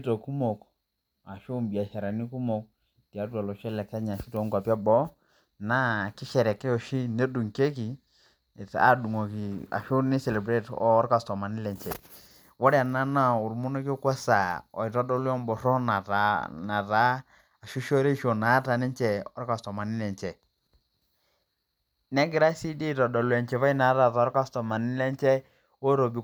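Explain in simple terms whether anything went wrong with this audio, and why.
Nothing went wrong with this speech recording: no technical faults can be heard anywhere in it.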